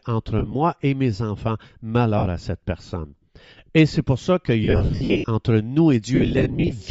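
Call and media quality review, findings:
Bluetooth LC3 compression, whole clip: likely cause is a low-bitrate LE Audio link, the sound pointing to roughly 32 kbps with 10 ms frames. The encoder zeroes much of the upper spectrum and fills it with noise. The speech carries a plainly audible breathy, grainy edge, with the high band thin and hissy rather than detailed.

Lost LE Audio frames, four bursts. The link drops frames and the LC3 decoder conceals them by repeating the last spectrum with randomised signs. 0.39–0.54 s, just before "et mes enfants": about 80 ms lost across 140 ms, with short gaps of around 20 ms. 2.18–2.26 s, just before "à cette": 60 ms lost in 80 ms, with one run of around 50 ms. Both give brief noisy smears over the voiced sound.

Lost LE Audio frames, heavier bursts, with the same frame drops and spectral-repeat concealment. 4.64–5.28 s: about 460 ms lost across 640 ms, runs up to around 70 ms. 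6.15–6.73 s: 350 ms lost across 560 ms, runs of around 50 ms. The speech breaks into a rough, noisy wash, and the longer runs sag toward quiet before the signal returns.

Pre-emphasis left on, 4.52 s to the end, starting just after "c'est pour ça". The treble boost applied for recording or transmission is never undone by the matching de-emphasis. The shape fits the CD 50/15 µs curve, with 10 kHz standing about 8 dB high relative to 1 kHz. From there the speech turns thin, bright and over-sibilant, and the noisy concealment bursts sound harsher.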